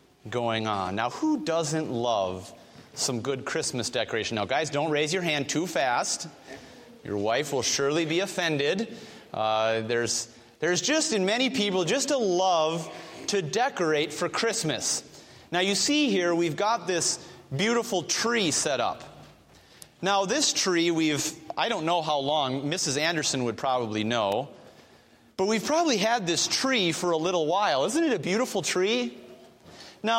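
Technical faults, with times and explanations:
0.0 to 10.05 s, mains buzz: a steady, raspy buzz sits roughly 40 dB under the sound for the first ten seconds. Switching spikes twice per 60 Hz cycle are getting in, so harmonics stack up into the kilohertz range and give it that edge.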